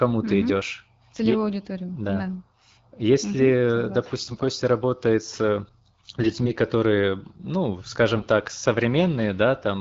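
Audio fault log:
4.27–4.46 s, 6.20–6.52 s, 8.15–8.24 s: AMR bit errors. Speech turns hoarse and gargly just before "работает с", between it and "которые ну", and after "которые ну". Flipped low-priority bits misplace excitation pulses and skew gain and spectrum. Unlike dropouts, pitch and level persist through the 12.65 kbit/s wideband link.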